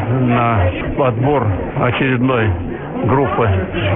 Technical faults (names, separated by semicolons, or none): aliasing